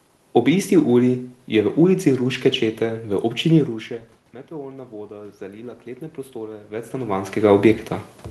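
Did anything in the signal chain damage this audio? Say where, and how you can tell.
Yes, in the call processing stage, where the automatic gain rising is audible from 4.48 s to 7.4 s. After the input level drops by about 20 dB, the gain control ramps up by about 8 dB over nearly three seconds, so the voice and the room noise behind it swell together. On a waveform the envelope grows steadily across that span, and on a spectrogram the background noise floor brightens in step with the speech.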